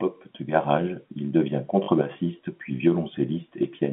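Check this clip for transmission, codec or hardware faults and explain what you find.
One transmission fault is audible, on a telephone-band G.711 line (about 150 Hz to 3.5 kHz).

Packet loss with last packet repeated, 1.84 to 1.88 s: the receiver replays the last packet to fill a 40 ms gap, which fits two 20 ms packets, producing a short robotic stutter.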